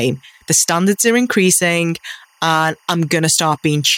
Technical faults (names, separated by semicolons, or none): timecode bleed